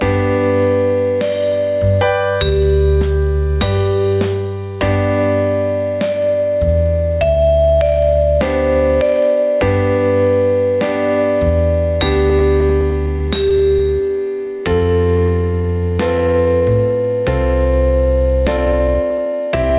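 Gain pumping runs through the whole clip. The gain swings by about 10 dB, pulled down on each loud sound, likely from a fast limiter fighting excessive input gain. On a waveform, the envelope looks flattened.

From 12.3 to 14.61 s come repeated stalls (stutter). The jitter buffer keeps running dry, and the receiver stretches the last sound across a string of brief gaps, the longest 13 ms, filling about 212 ms in total. It sounds choppy and dragging, and a spectrogram shows smeared, repeated vertical slices.

From 14.62 to 16.62 s, a jitter buffer slow-down adds about 199 ms by repeating pitch periods. Playback runs at 91% speed at unchanged pitch, so harmonics on the spectrogram stay level while events stretch out.

From 18.57 s to the end, a jitter buffer speed-up trims roughly 150 ms of pitch periods to cut delay. The audio plays about 13% fast and sounds hurried, with events compressed in time but harmonics unshifted. 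Throughout, the call path's band limit shows as empty spectrogram above 4 kHz.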